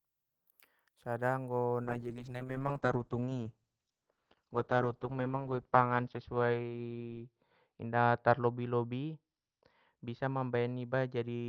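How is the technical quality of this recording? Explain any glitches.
The recording degrades partway through because of a call bitrate drop. From 1.85 s to the end, the encoder falls from 32 kbps to 8 kbps, with the lowest rate held for about 4.2 s. Coding turns coarse and bandwidth shrinks from 20 kHz to 6 kHz, so the speech sounds muffled and watery. Unlike packet loss, there are no gaps or dropouts, just a sustained loss of detail.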